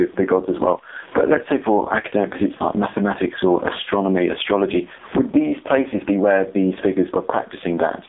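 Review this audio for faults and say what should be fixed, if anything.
Gain pumping runs through the whole clip. The quiet room background sits about 41 dB below the speech, and the gain swings by about 15 dB. Loud and soft syllables end up squashed toward one level. The likely cause is input gain set far too high, with a fast limiter or compressor clamping down on every loud moment and releasing in the pauses. Lower the input gain and slow or disable the limiter so it stops riding the level.

AMR narrowband mobile codec damage is also present throughout. The audio is confined to a telephone band of roughly 250 Hz to 3.7 kHz, with nothing at all above 3.7 kHz, so sibilants and consonant detail are gone. The coding damage is heavy: the speech sounds buzzy and synthetic, the mark of a vocal-tract model rebuilt from very few bits, which fits AMR-NB's low-rate 5.15 kbps mode. Route the audio over a wideband or higher-bitrate path instead of a narrowband mobile link.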